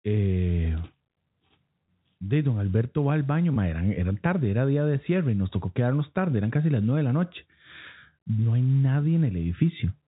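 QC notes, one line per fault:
1.86–1.88 s and 3.54–3.56 s, packet loss with pitch repetition: single 20 ms losses before "de don" and after "va al baño", each filled by repeating the last pitch period, giving a brief buzzy hold. On a spectrogram the harmonics briefly go flat, and the waveform shows identical repeated cycles.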